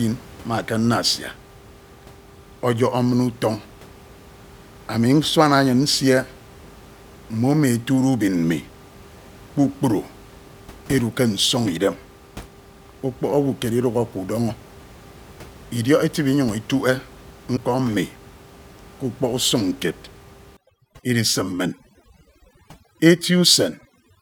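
At 14.49 to 14.51 s and again at 17.56 to 17.58 s the speech skips forward, each glitch lasting about one 24 ms frame. This is likely a broken MP3 bit reservoir: after frames were lost, the next frame reached back for borrowed data and decoded bytes belonging to another frame. Unlike a plain dropout, the audio jumps ahead rather than simply going silent.

From 20.57 s to the end, overdone noise removal takes over. The room noise, about 24 dB below the speech before this point, collapses to near silence dotted with twinkling specks, and quieter parts of the voice are cut along with the noise. What separates this from a low-bitrate codec smear is that the artefacts track the background level rather than the speech. The speckle sits in the pauses, where the suppressor is gating bands on and off.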